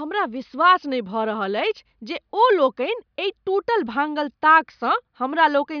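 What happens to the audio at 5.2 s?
Nothing goes wrong at 5.2 s; the speech runs on intact there, with no dropout, click, distortion or other fault at that point.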